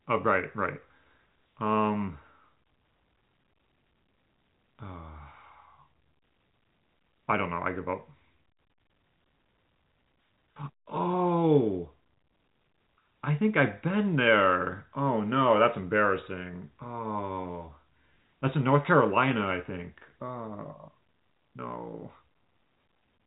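No technical faults can be heard in this telephone speech.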